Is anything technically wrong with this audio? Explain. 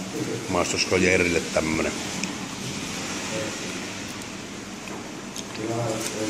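No, nothing is technically wrong with this audio.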